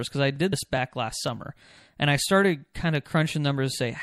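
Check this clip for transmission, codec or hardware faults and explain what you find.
Three problems show up in this speech clip: a codec sound throughout, a stutter at regular joins, and one skip.

MP3 compression runs the whole way through. The speech sounds watery and dull on top, with swirly s sounds. That's likely a low-bitrate encode, something like 64 kbps, cutting treble and flickering weak frequency lines.

Overlapping chunks cause a short click or stutter at 0.36, 0.77, 1.28, 1.79, 2.29, 2.80 and 3.30 s, every half second. Each chunk starts about 6.5 ms before the last ended, so that sliver plays twice.

Compressed frames are skipped at 0.52 s, where the audio jumps ahead by roughly a tenth of a second. That fits a few 24 ms frames going missing, and it's heard as a brief smeared blip rather than a hard click.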